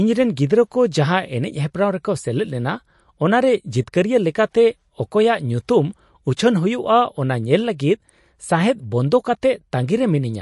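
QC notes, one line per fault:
Throughout, MP3 compression: the speech sounds watery and swirly, with metallic chirps on s sounds, smeared attacks, and nothing above 11.3 kHz. The likely cause is a starved MP3 encode, which fits about 48 kbps, cutting the treble and letting weak frequency lines flicker between frames.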